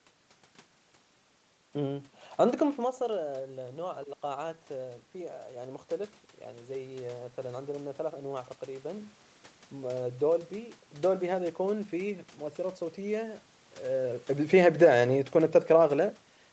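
Around 2.5 s the talker moves back, and the input drops by about 13 dB. From 3.31 to 5.93 s the automatic gain rises by about 3 dB to make up for it. Voice and room noise swell together. A second rise follows from 6.69 to 9.11 s, adding about 4 dB.

Near 13.5 s the talker moves again. From 14.35 to 16.13 s the automatic gain falls by about 3 dB. The control judged the input too loud, or its background noise too strong, and pulled back gradually. The speech sinks, and the room noise sinks with it.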